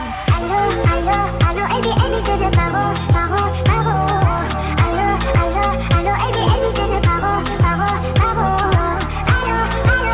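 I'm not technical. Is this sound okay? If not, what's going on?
Yes, it's okay; nothing here points to a problem.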